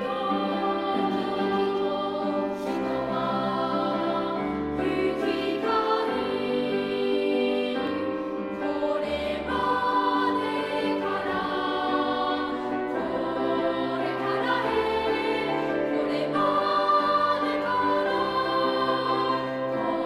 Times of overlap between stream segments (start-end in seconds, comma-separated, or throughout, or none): 7.87